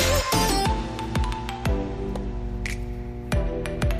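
From 0.50 s to the end of the clip, a mains hum sits under the sound: a steady low tone at 60 Hz with some low harmonics above it. This is power-line interference, most likely from a ground loop or a nearby transformer coupling the 60 Hz supply into the signal path. The hum is strong, at roughly 10 dB below the wanted signal.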